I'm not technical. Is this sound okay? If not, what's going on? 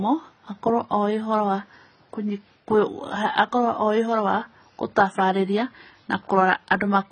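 No, the speech sounds dull and a bit smeary the whole way through, with nothing above about 9.2 kHz, most likely from heavy AAC compression squeezing the file down.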